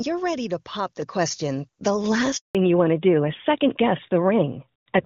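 At 1.02 s the microphone volume is stepped up by about 5 dB in a single jump. The call software judged the input too quiet and raised the device gain at once. Speech and the room noise behind it get louder together, which separates this from a talker simply raising their voice. The background floor would stay put in that case, and here it lifts with everything else. The change is instant, not a gradual automatic-gain ramp.

From 2.37 to 2.55 s there is a handover gap of 180 ms, as the call moves between networks and no speech frames arrive during the switch. The sound fades out over a few tens of milliseconds and stays fully silent until the new link picks up, and whatever was said in that stretch is gone. Unlike packet-loss concealment, nothing is filled in: there are no buzzy repeats or smeared syllables, only a clean hole.

Right after the gap, from 2.55 s to the end, the call falls back to narrowband. 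Everything above 4 kHz disappears and the speech turns duller and rougher, with sibilants losing their edge. Before the handover the brighter wideband sound fits HD Voice at around 23.85 kbit/s. Afterwards the band limit and texture point to an older narrowband codec at about 12.2 kbit/s. This is a permanent switch at the handover, not a brief dropout of high frequencies.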